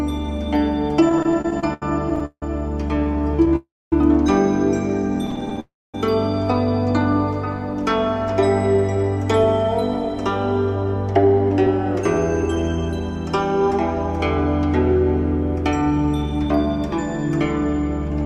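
From 1.09 to 3.52 s there are repeated stalls (stutter). Packets arrived late, so the buffer ran dry 24 times. Each gap, up to 163 ms, is filled by stretching the last sound, and the audio drags.

From 3.56 to 3.93 s comes a call audio freeze, likely from packets held up in transit. The sound hangs, fades, then goes quiet for about a quarter second before resuming where it stopped.

From 5.27 to 5.58 s the stutter returns as seven brief catches, none longer than 14 ms.

Another freeze follows at 5.60 to 5.95 s. It is the same held, fading sound with a silent stretch, then the audio picks up again.

From 8.74 to 13.71 s a jitter buffer speed-up plays the audio at 104% speed. The receiver trimmed short pitch-period slices, roughly a fifth of a second in total, to cut the built-up delay. Pitch stays steady while the pace quickens slightly.

From 15.82 to 18.20 s the speed-up recurs at 109%, again removing about a fifth of a second, so the audio sounds noticeably hurried.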